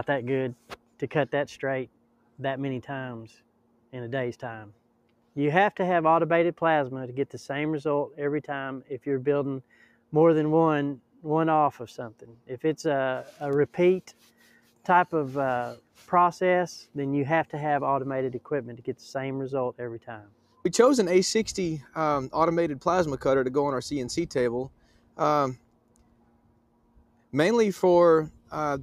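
A noise suppressor built for speech stays active across the whole clip, applied to music or other sounds it was not designed for. It treats steady tones, ambience and decay as noise and pulls them down. Onsets pass, but sustained parts sink. The level swings by something like 5 dB as the suppressor works, so the sound pumps and thins rather than holding steady.

Sound cut by the noise suppressor occurs at 0.55 to 2.39 s, 3.35 to 5.36 s, 8.82 to 12.49 s, 14.07 to 16.95 s, 20.0 to 20.64 s, 24.69 to 27.33 s, and 28.33 to 28.51 s. In each, the suppressor judges the sound to be noise and ducks it harder than the rest. Drops reach about 12 dB, and about 11 dB in the last. Held and fading parts dip or lose their tails, while sharp attacks survive.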